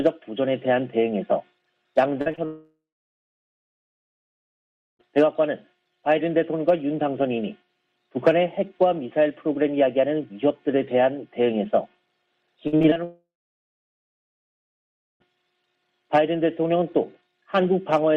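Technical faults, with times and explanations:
2.21 to 2.39 s, short concealed packet loss: three holes at 2.21, 2.32 and 2.35 s, missing 40, 20 and 20 ms, each patched by extending the preceding sound, heard as brief smears.
2.45 to 5.01 s, long network dropout: about 2.54 s never arrived, likely from a network outage. The last sound is briefly continued, then about 2.2 s of silence before audio resumes with that part lost.
12.67 to 13.01 s, repeated packet loss (robotic sound): five successive gaps, the longest 51 ms, with about 45% of the span filled in, making the sound choppy with pieces missing.
13.04 to 15.22 s, long network dropout: about 2.16 s is missing. A short concealed tail gives way to about 1.94 s of silence, and the audio returns without the lost stretch.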